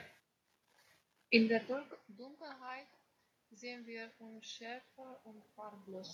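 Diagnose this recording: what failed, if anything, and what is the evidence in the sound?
Automatic gain rising, in call processing: the talker moves away around 1.5 s, and from 1.32 to 5.94 s the AGC slowly pulls about 7 dB back, lifting the room noise with the voice.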